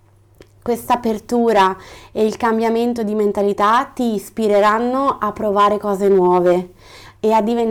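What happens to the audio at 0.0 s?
Nothing goes wrong at 0.0 s; the audio is intact there, with no dropout, click, distortion or other fault at that moment.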